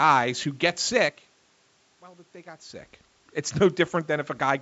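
Speech recording; there are no technical faults to report.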